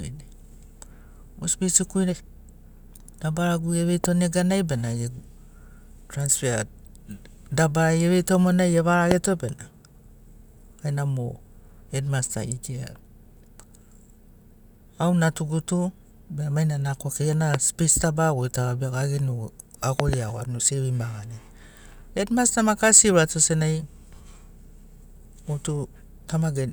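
Sharp pops cut through the speech, which carries on beneath them: a single one from 4.04 to 4.06 s standing about 15 dB above the signal, then single pops at 9.11 to 9.14 s and 17.54 to 17.56 s, and a double pop from 20.00 to 20.15 s, each about 20 dB above the signal. These are loud pops, likely caused by sudden voltage pulses from a plug, switch, static or driver glitch entering the signal path.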